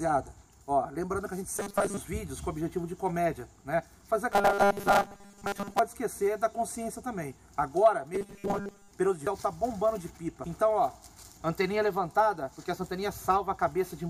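At 1.56 to 1.97 s, again from 4.32 to 5.79 s, and once more at 8.15 to 8.91 s, the sound turns into a rigid metallic buzz pitched at 200 Hz. That's robotic sound from repeated short buffers, likely from audio arriving too late and a 5 ms chunk being looped over and over, so most of that stretch is repeats rather than real audio. Then at 9.27 s there's a quick blip from damaged data in a compressed stream, where the decoder hits corrupted frames, loses sync and skips ahead to the next good one.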